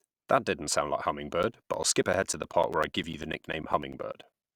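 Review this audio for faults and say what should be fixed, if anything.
A steady train of ticks starts just after "didn't sound like" at 1.33 s and runs to 4.43 s, one every 0.1 s, around thirty in all. These are periodic USB or driver dropouts: something blocks the USB bus or audio driver on a fixed 10 Hz schedule, and each time roughly 10 ms of speech is lost and replaced by silence. The abrupt gaps in the waveform produce the clicks, which are audible wherever speech is present. To prevent this, find and disable the background process or power-saving setting that is interrupting the audio device at that fixed interval.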